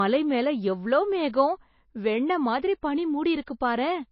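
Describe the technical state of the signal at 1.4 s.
At 1.4 s, as throughout, the speech stops dead near 5.5 kHz and carries smeary MP3 artefacts. This is likely low-bitrate audio saved at a high bitrate: the re-encode kept the first encode's losses, so unlike a plain lowpass, the coding smear remains.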